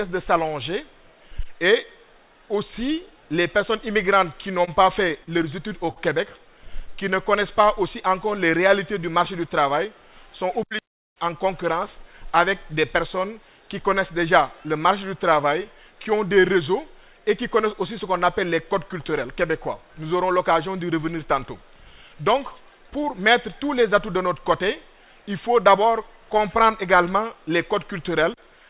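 From 4.42 to 5.29 s there are repeated stalls (stutter): packets arrived late, so the jitter buffer emptied four times, each gap bridged by continuing the preceding sound, 67 ms in all, the longest 30 ms. Nothing is lost, but the audio catches and drags. On a waveform, short repeated or smeared cycles interrupt the flow; a spectrogram shows brief horizontal smears where the patterns freeze.

At 5.91 to 5.98 s a short stall from a late packet holds the last sound for 53 ms until the packet turns up, after which the audio resumes where it left off, now 53 ms further behind. It sounds like a momentary sustain with a faint buzz or dip. A spectrogram shows a single frozen vertical slice stretched sideways.

Between 6.81 and 8.26 s a jitter buffer slow-down plays the audio at 96% speed, repeating single pitch periods to add 70 ms of reserve. Pitch is unchanged, but sounds are drawn out. On a spectrogram the harmonics keep their height while the features stretch horizontally.

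A jitter buffer speed-up runs from 10.19 to 11.71 s at 105% speed, trimming roughly a tenth of a second, and again from 21.80 to 23.19 s at 102%, removing around 40 ms. Short pitch-period pieces are cut, so the audio runs faster without rising in pitch, sounding hurried in the first stretch. Spectrogram features are squeezed together in time, with harmonic spacing intact. Throughout, the spectrogram is empty above 4 kHz, consistent with a narrowband G.711-type call codec.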